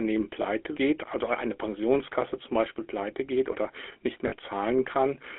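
The whole clip carries the GSM full-rate codec, and the damage is plainly audible: a buzzy, gravelly roughness over a narrow line band of about 300 Hz to 3.5 kHz. The excitation is rebuilt from sparse, regularly spaced pulses, which fits 13 kbps full-rate GSM.

Then there are lost GSM frames. From 0.42 to 0.64 s, just before "geht also eine", the decoder holds the last good frame, so you hear a short, rough metallic ring, consistent with a single dropped 20 ms frame. Again from 4.28 to 4.33 s, right after "pleite geht oder nicht", the same metallic smear appears, which points to two lost frames.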